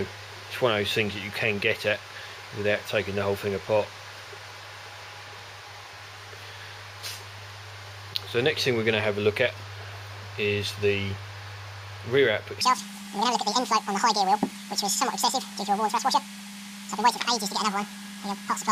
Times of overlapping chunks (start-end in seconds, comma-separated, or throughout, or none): none